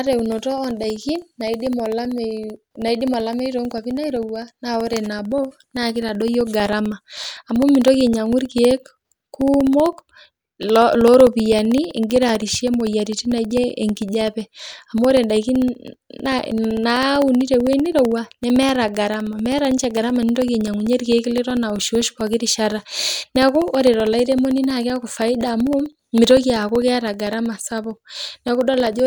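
From about 0.07 s right through to 29.0 s, the speech carries periodic USB or driver dropouts. Every 64 ms, roughly 16 times a second, something stalls the audio path and about a millisecond gets replaced by silence. You hear it as a steady ticking that rides along whenever there's signal.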